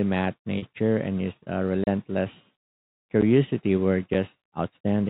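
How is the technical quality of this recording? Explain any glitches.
The recording has three glitches: one concealed packet loss and two blocks of digital silence. It is carried over G.711 telephone coding, so nothing above 4 kHz is present.

Packet loss with pitch repetition occurs at 0.58 to 0.62 s, just before "and his uh". About 40 ms went missing, which fits two lost packets. The receiver filled the gap by repeating the last pitch period. It sounds like a brief held, buzzy tone.

Blocks of digital silence occur at 1.84 to 1.87 s, right after "and his uh", and at 3.21 s. They last about 33 ms and 10 ms. The output buffer was likely not filled in time, so samples became zeros. Each drop has hard edges, heard as a short hole and a tick.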